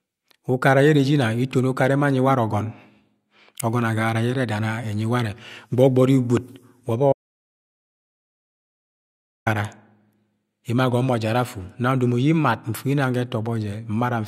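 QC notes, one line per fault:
7.13–9.46 s, audio dropout to silence: the input feed was likely cut, through a disconnected device, failed link or stray mute, while the recorder kept writing silence. The speech stops mid-flow, leaving 2.34 s of total silence without room tone before it abruptly resumes.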